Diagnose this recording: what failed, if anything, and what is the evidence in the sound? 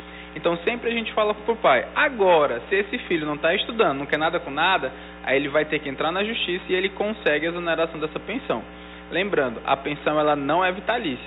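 Nothing failed here, since no stage from the wiring through to playback leaves any mark in the sound that I can hear.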